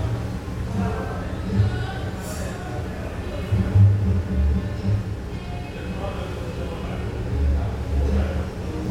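No technical faults are audible anywhere in the audio.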